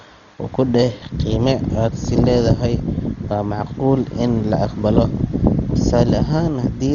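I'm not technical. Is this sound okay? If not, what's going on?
No. From start to finish the speech sounds dull and muffled, with nothing above about 7 kHz, and a rough, fluttering hiss clings to it. That grainy texture, rather than simple muffling, points to heavy Dolby Digital compression as the likely cause.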